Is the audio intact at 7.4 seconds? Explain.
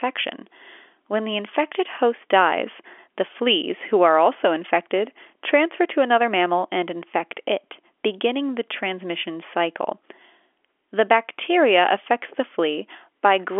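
Yes, at 7.4 seconds the speech is intact, with no dropout, click or distortion, only the narrow telephone band of G.711 coding, which removes everything above roughly 3.7 kHz.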